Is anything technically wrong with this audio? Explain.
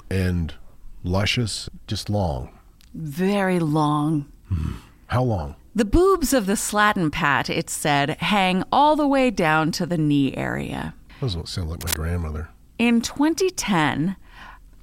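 Yes. From 11.77 to 11.97 s, a burst of scratching, rustling noise sits over the speech for about 0.2 s, not far below the speech level (roughly 5 dB under it). This is cable scratch noise, likely from a worn cable, connector or control carrying a DC voltage being moved. As it shifts, its contact resistance jumps around rapidly, and those rapid changes turn into dense, irregular noise bursts mixed into the signal.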